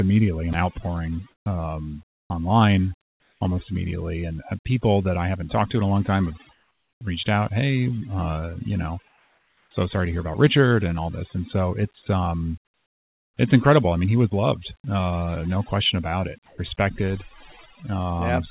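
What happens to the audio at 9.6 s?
Right there you're inside a short gap, from 9.08 to 9.71 s, between "hey uh you know" and "sorry to hear about". The real background drops out for those 0.63 s and a smoother, different-sounding noise about 6 dB quieter sits in its place. That's likely comfort noise: the sending end stopped transmitting during the pause and the receiver filled it with synthetic noise.

On top of that, overdone noise removal is running across the whole clip, including this moment. The suppressor pushes frequency bands near its noise estimate far down or off, so what's left of the background breaks up into twinkling, warbling specks.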